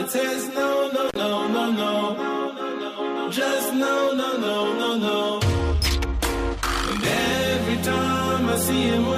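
At 1.09 s an intermittent contact breaks the signal path: a loose plug or cable connection briefly opens, and the sound drops out for about 49 ms before returning at 1.17 s. Each edge of the gap carries a short crackle, with faint hiss filling the silence between.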